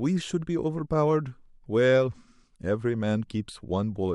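Nothing in this bit of speech calls for a technical complaint; there isn't a fault to point to anywhere in it.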